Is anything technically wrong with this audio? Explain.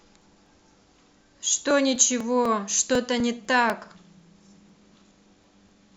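Yes. From 0.22 s to 5.69 s the speech carries periodic USB or driver dropouts: every 0.249 s something stalls the audio path and around a millisecond of signal is skipped outright. The result is a steady train of about twenty small ticks, audible only where speech is present.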